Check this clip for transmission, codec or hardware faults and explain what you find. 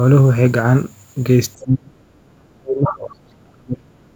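One fault stands out: speech suppressed in double talk. Between 1.58 s and 4.05 s the speech is pushed down for about two seconds in total. At its deepest it falls by about 35 dB. The likely cause is an echo canceller hearing both sides at once. It could not tell this talker from the loudspeaker echo, so it turned both down.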